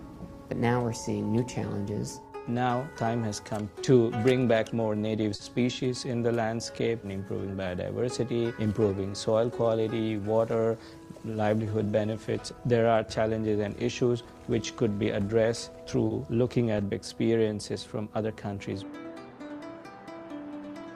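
At 5.35 s and again at 16.07 s, a packet arrived late and the jitter buffer ran dry, giving a short stall from a late packet. The receiver held the last sound for about 40 ms the first time and 30 ms the second, then resumed exactly where it stopped, so nothing is lost. Each is heard as a brief unnatural sustain with a faint buzz or dip, pushing the rest of the audio slightly later.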